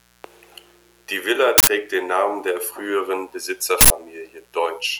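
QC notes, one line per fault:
Throughout: mains buzz, a steady raspy buzz under the speech at roughly 35 dB below the signal. Sharp switching spikes arrive twice per 60 Hz cycle, so harmonics of 60 Hz extend up into the kilohertz range, giving the edge.
1.58–1.67 s and 3.81–3.90 s: uninitialised buffer, two loud bursts of digital noise, each about 93 ms. A block was played before any audio was written to it, so stale memory came out as samples; the length fits a 4096-sample block.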